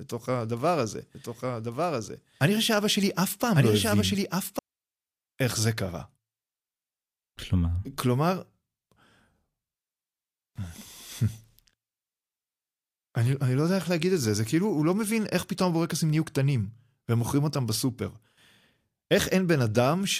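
From 1.15 s to 4.59 s a second copy of the speech runs about a second behind the original, a few decibels quieter, dry and full-band, and it starts and stops abruptly. This doubled audio track is likely from a slower second capture path.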